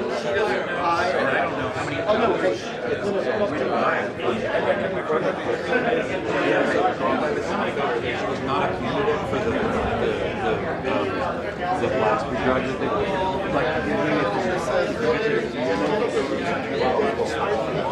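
Nothing in this audio stands out as a technical fault, so there's nothing to flag here.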